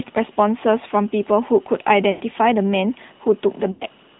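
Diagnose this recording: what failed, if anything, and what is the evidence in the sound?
The failure at the codec stage is a narrowband mobile link: the speech passed through the AMR narrowband mobile codec, which samples at 8 kHz and rebuilds the voice from a vocal-tract model excited by a few pulses per subframe. Nothing above 4 kHz survives, so the whole recording sounds band-limited and boxy. The buzzy, synthetic texture is plainly audible throughout, which fits an upper AMR-NB mode around 10.2 kbps.

On the network side, lost AMR speech frames produce two dropouts, at 2.12 to 2.22 s and at 3.72 to 3.86 s. In each, the decoder had no valid frame and kept repeating the last good pitch and spectral settings at decreasing gain. The sound smears into a drawn-out, fading tone rather than cutting cleanly. Each gap sounds consistent with about 80 ms of missing audio, roughly four consecutive frames, before the speech returns weak or rough for a moment.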